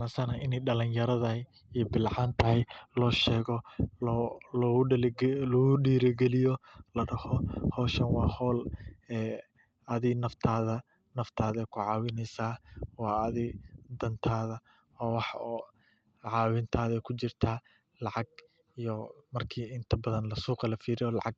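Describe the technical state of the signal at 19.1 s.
At 19.1 s the speech is intact, with no fault at that moment, only the ordinary coding character and reduced top end of a WebRTC call path passing through as normal.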